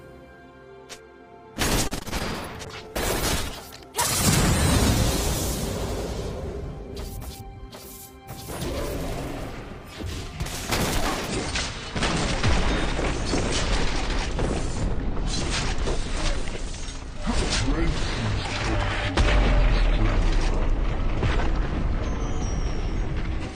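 Right at 1.87 s there's a burst of repeated packet loss that runs to about 2.22 s. A handful of short holes, the longest around 35 ms, get patched by stretching the last bit of sound. That covers roughly 30% of the stretch and leaves it choppy and a bit robotic.

From 2.66 s to 7.77 s you get a call bitrate drop, with the encoder pushed from 128 kbps down to 15 kbps for about five seconds. The coarser coding strips the top end, so everything turns muffled, watery and rough until it recovers.

Overlapping the tail of that, from 7.37 s to 7.74 s, the jitter buffer speeds up. It's trimming tiny pitch-period slices to shed around 40 ms of built-up delay. The sound plays about 9% faster at the same pitch and feels briefly rushed.

From 11.28 s to the very end, the audio plays at 0.61 times its proper speed, so it drags and sits roughly ten semitones low. That's a section at the wrong speed, likely from being played back against the wrong clock.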